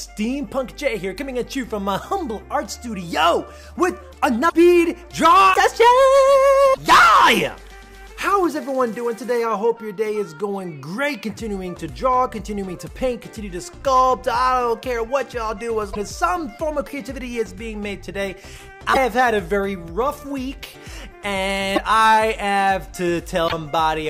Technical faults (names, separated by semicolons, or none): broken MP3 bit reservoir